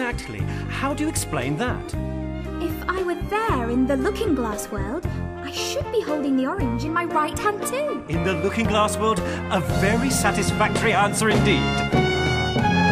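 No technical faults can be heard anywhere in this audio. Nothing in it points to a problem in the recording or playback chain.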